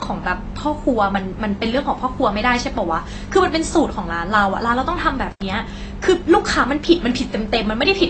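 From the start the speech sounds dull and smeared, with nothing above 8.3 kHz and a fizzy edge. That's likely AAC compression at a low bitrate, around 24 kbps. At 5.31 to 5.42 s there's an intermittent contact: the line opens for about 85 ms, cutting the sound out with crackle on either side.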